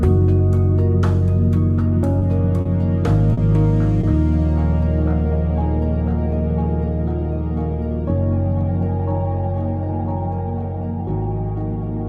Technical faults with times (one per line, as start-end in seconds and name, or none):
2.19-2.24 short stall from a late packet
2.61-2.68 short concealed packet loss
3.33-3.40 short concealed packet loss
4.01-4.06 short stall from a late packet